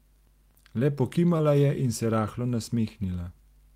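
A speech clip with a brief smear or wobble from 1.37 to 1.41 s, where a short concealed packet loss occurred. About 20 ms of audio never arrived in time, so the receiver extended the preceding sound to bridge the gap, then blended back into the real signal.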